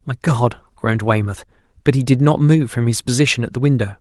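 No faults found; the speech shows only the light texture of fullband Opus voice compression, consistent with its hybrid mode.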